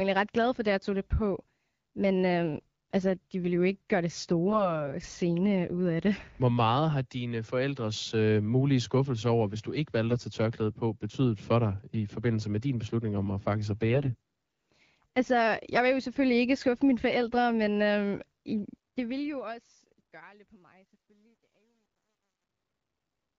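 Around 4.48 to 4.81 s, and again from 13.90 to 14.16 s, you get AMR bit errors: flipped low-priority bits knock the excitation and fine parameters off, so the speech turns scratchy and gargly.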